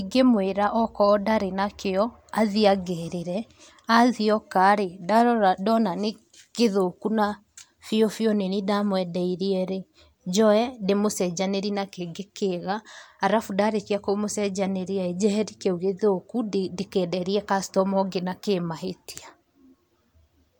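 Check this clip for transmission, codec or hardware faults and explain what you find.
Nothing turned up on this listen: the speech comes through without any dropouts, glitches or other faults from the transmission path or the equipment.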